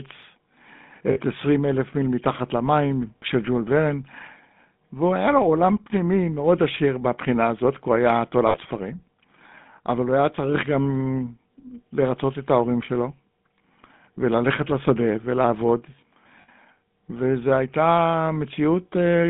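Speech coded through the GSM full-rate codec: band-limited to about 150 Hz–3.6 kHz with a buzzy, gravelly roughness, unlike the cleaner, smoother narrowband sound of G.711 telephone lines. Lost GSM frames at 1.12–1.18, 3.18–3.23, 8.48–8.57 and 16.42–16.49 s, lasting 40 to 60 ms each, hold the sound as a brief metallic ring rather than a silent dropout or a click.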